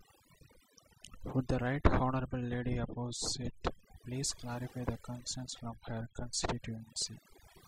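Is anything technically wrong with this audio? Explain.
Yes. Throughout, the speech carries overdone noise removal: bands near the estimated noise floor were cut hard, taking quiet speech detail with them. The background drops and breaks up into twinkling specks, and a spectrogram shows patchy, isolated bright dots between harmonics.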